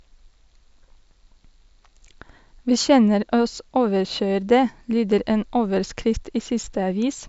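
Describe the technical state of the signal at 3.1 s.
At 3.1 s the speech signal is intact, with no technical fault audible at that moment.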